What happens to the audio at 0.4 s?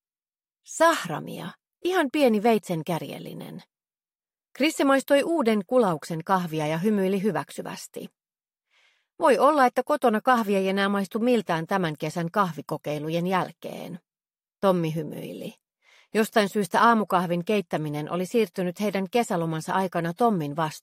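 Nothing goes wrong at 0.4 s; the audio plays through that moment intact, with no dropout, click, distortion or other fault to be heard.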